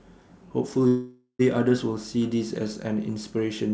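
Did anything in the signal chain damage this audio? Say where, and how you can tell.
Yes, there's a call audio freeze from about 0.88 s to 1.41 s. The speech stalls and the receiver stretches the last sound into a fading buzz or hiss that trails off into roughly 110 ms of silence before the talker picks up exactly where they stopped. Nothing's been dropped; it's about half a second of filler pushing everything after it later. That's the network stage, likely packets held up in transit until the jitter buffer ran dry, on a G.722 path with nothing above 8 kHz.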